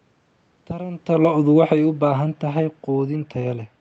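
A speech clip with one fault: automatic gain falling. From 1.08 s to 3.68 s the level sinks steadily by about 7 dB. The room noise drops with it, so the whole signal is being turned down. The automatic gain control judged the input too loud or its background noise too strong and lowered its gain slowly. The talker also shifts position around 1.0 s. The Opus call path limits the band to 8 kHz, and its coding noise fits a rate near 32 kbps.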